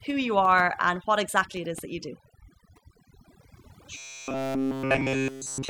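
Overdone noise removal runs through the whole speech clip. The noise reduction was set too strong. Frequency bands near its noise estimate are pushed down or switched off, and quiet parts of the voice go with them. The background breaks into twinkling, warbling specks.

From 3.97 s to 5.69 s, the sound turns into a robotic sound from repeated short buffers. A rigid, metallic buzz at 134 Hz sets in. The likely cause is audio arriving too seldom, with a chunk of about 7.5 ms repeated to fill the gaps. All of this stretch is repeats.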